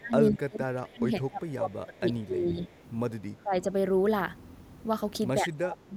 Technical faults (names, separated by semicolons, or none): speech suppressed in double talk; echo leak